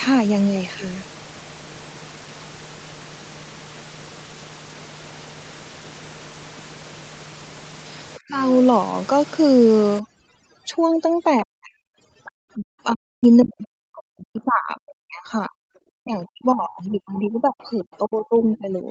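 From 8.18 to 8.52 s the echo canceller likely mistook the near talker for loudspeaker echo during double talk and pulled the signal down hard, by about 35 dB at its deepest. This is speech suppressed in double talk, and it sounds like the speech sinking abruptly into a hole before recovering. The same clamping returns at 11.43 to 11.71 s, dropping about 40 dB, and again over longer spans from 12.56 to 15.55 s and 16.02 to 18.87 s, where the speech dips and breaks into pieces.

From 9.99 s to the end, overdone noise removal is at work. The suppressor is set too aggressively for a background that sits about 18 dB below the speech. It cuts individual frequency bands whenever they approach its noise estimate, so the pauses fall to near silence scattered with twinkling specks. Quieter parts of the speech are stripped along with the noise.

The other side's voice leaking through appears in four places. 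Brief scraps come through at 12.24 to 12.32 s (about 25 dB below the speech), 13.23 to 13.28 s (about 30 dB) and 15.75 to 15.79 s (about 40 dB). A longer stretch runs from 16.89 to 17.98 s at about 30 dB down. The likely cause is loudspeaker pickup that the echo canceller failed to remove, and the leaked voice sounds faint.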